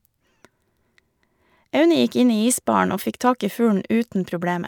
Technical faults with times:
none

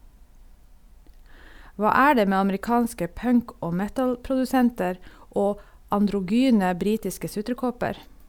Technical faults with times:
none

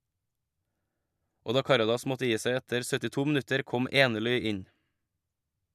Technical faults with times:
none

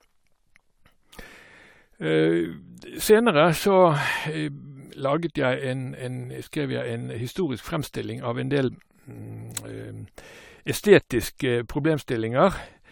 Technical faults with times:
0.00-12.92 generation loss

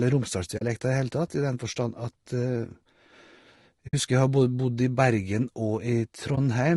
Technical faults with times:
0.00-6.77 low-delay AAC compression
0.57-0.62 AAC frame loss with muting
3.87-3.94 AAC frame loss with muting
6.35-6.38 AAC frame loss with muting

